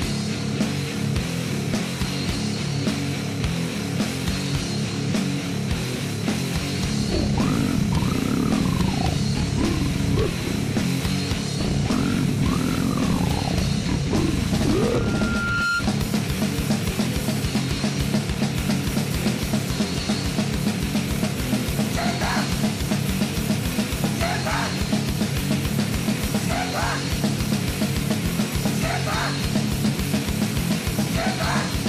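From 14.89 to 15.85 s, loudspeaker feedback squeal: a 1.4 kHz tone swells over roughly 0.7 s to about signal level, showing as one bright horizontal spectrogram line.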